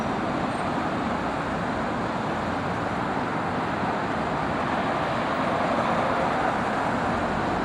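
From start to finish, computer activity noise sits under the sound: a buzzy, chirping texture pulsing at a few hundred times per second, roughly 35 dB below the sound. Shifting processor or graphics load disturbs the shared ground. Unlike steady mains hum, it wavers with computer activity.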